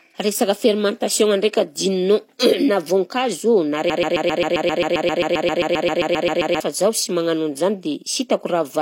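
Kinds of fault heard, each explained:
Broken-record loop: a 0.13 s fragment repeats 20 times from 3.90 to 6.60 s before "zaho sy magnano an'izany", likely a stalled stream resending its last piece.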